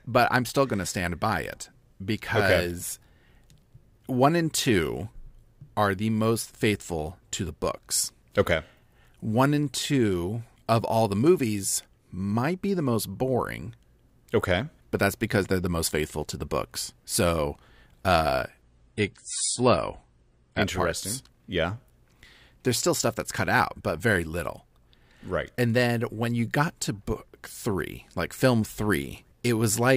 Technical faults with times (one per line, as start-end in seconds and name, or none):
18.62-20.62 adaptive stream at a lower bitrate